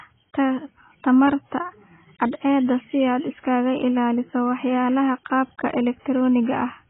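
From start to finish the speech sounds dull and smeared, with nothing above 3.8 kHz and a fizzy, warbling edge on sibilants. That's most likely heavy AAC compression, with the encoder lowering the cut-off and thinning the spectrum, which fits a very low bitrate around 16 kbps.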